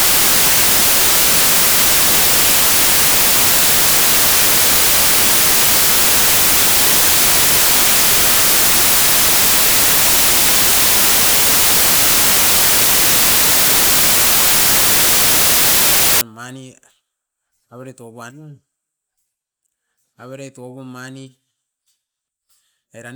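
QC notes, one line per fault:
0.00–16.21 s: samples built from the wrong bytes; misassembled sample words turn low-order bits into loud, harsh broadband noise, close to white on the louder speech.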